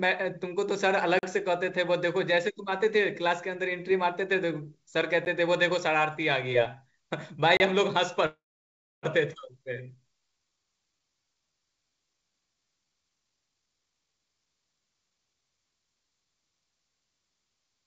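Blocks of digital silence cut the speech abruptly at 1.19–1.23 s (40 ms), 5.25 s (10 ms) and 7.57–7.60 s (30 ms). From 8.26 to 9.06 s a call audio freeze, likely from delayed packets draining the jitter buffer, stretches the last sound into a fading tail that falls to silence for about 660 ms. Speech then resumes with nothing lost. At 9.33–9.37 s a skip ahead discards roughly half a second of queued audio, so the speech jumps forward with almost no gap. From 9.59 to 13.11 s a jitter buffer slow-down rebuilds reserve by repeating pitch periods, adding 457 ms. The speech runs at 87% speed with unchanged pitch, over a call path that carries nothing above 8 kHz.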